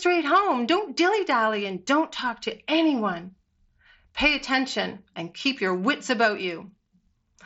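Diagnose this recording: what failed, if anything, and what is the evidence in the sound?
Nothing failed: the speech arrives over a Bluetooth mSBC headset link with content ending near 7.7 kHz and the light graininess that wideband codec leaves, and no stage from wiring to playback shows a fault.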